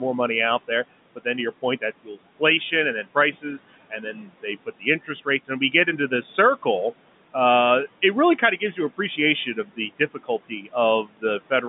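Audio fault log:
throughout: noise suppressor artifacts. The room noise, about 18 dB under the speech, is pushed down by about 17 dB in pauses and swells back beneath each phrase. Here the background pumps.
1.62–2.72 s (after "to your"), 3.03–3.59 s, 3.9–6.12 s (ending before "circle uh it really"), 8.38–10.74 s (after "circle uh it really"), 11.05–11.63 s: speech cut by the noise suppressor. Brief pieces of speech are misread as noise and turned down by about 10 to 18 dB, from a tenth of a second to half a second in each stretch. The affected speech sounds swallowed or faint rather than abruptly silenced.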